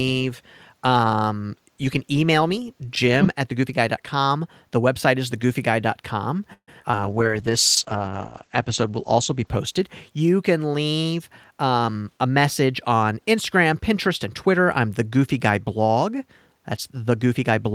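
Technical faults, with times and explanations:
6.53–6.95 s, repeated packet loss (robotic sound): Four gaps fall within this short stretch, the longest 141 ms. The receiver filled 176 ms by extending the preceding sound, about 42% of the span, and a further 80 ms simply went missing. Because one patch follows another so quickly, the speech turns choppy and takes on a robotic edge, with small pieces dropped out entirely.
6.95–7.15 s, jitter buffer slow-down: Right after the losses, the receiver rebuilt its reserve by repeating single pitch periods several times in a row, adding 39 ms of audio. Playback drops to about 85% of normal speed while the pitch stays the same, so the speech sounds briefly drawn out and slightly stretched rather than lower.
7.04–10.67 s, call bitrate drop: Here the coding turns coarse. The roughness points to the encoder falling from around 32 kbps to about 9 kbps, and the low point lasts about 1.3 s. 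Along with the coarser coding, the audio bandwidth narrows from 20 kHz to 8 kHz. The speech sounds rough, watery and muffled, with sibilance dulled, until the bitrate recovers.
11.05–12.33 s, jitter buffer speed-up: The buffer was holding more audio than its target, so the receiver cut short pieces of one or a few pitch periods again and again, taking out roughly 0.15 s in total. The speech plays about 10% fast at unchanged pitch, which makes this passage sound slightly hurried and compressed in timing.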